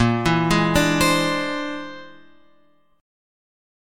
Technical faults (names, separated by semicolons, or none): none